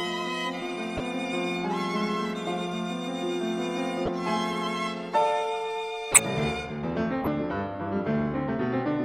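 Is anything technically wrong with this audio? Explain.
Yes. There are four corrupt frames decoded, at 0.97–1.00, 4.06–4.09, 6.12–6.25 and 7.20–7.27 s. Damaged bits in a few compressed frames were played anyway, so energy lands at wrong frequencies. Each is a brief chirp or noise burst. The one at 6.12 s is much louder.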